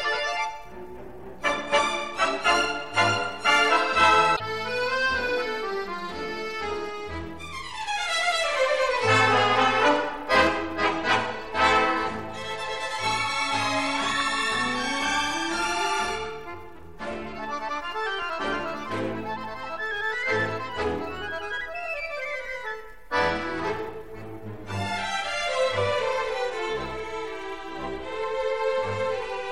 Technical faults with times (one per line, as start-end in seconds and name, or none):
4.35-4.41 broken MP3 bit reservoir